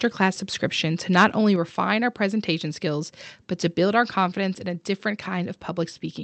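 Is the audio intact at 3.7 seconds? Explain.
Yes, the audio at 3.7 seconds is intact, with the speech coming through the call path without any dropout, glitch or other fault at that moment.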